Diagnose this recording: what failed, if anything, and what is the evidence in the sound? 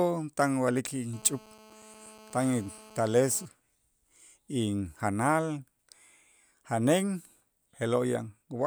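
A nearby 2G handset on a call was coupling its radio bursts into the analogue wiring, where the input circuitry rectified them into audio. The result is a GSM phone buzz from 1.13 s to 3.46 s: a harsh, raspy tone at 217 Hz, rich in harmonics, sitting about 24 dB below the speech and entirely unrelated to it. The buzz holds steady throughout, as expected from continuous call transmission.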